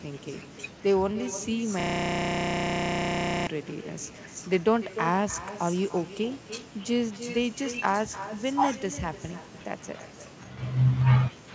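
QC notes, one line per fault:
Throughout: echo with no canceller. Every phrase is followed by a quieter, thinner copy about 0.3 s later, sitting roughly 13 dB below the direct speech. The far end is playing the call over a loudspeaker and its microphone is feeding that playback back down the line with nothing cancelling it, so the talker's own voice returns after the network round trip. The echo is band-limited along with the rest of the call audio, which tops out at 8 kHz.
1.80–3.47 s: system hang loop. A single 32 ms slice of audio repeats back to back for about 1.7 s, giving a hard, pitched buzz at 31.2 Hz rather than a stutter, because the repeated piece is so short. The sound hardware kept cycling the same ring buffer while the system or driver stalled; the 32 ms period fits a 512-sample buffer. Normal speech resumes at 3.47 s, with the echo still present.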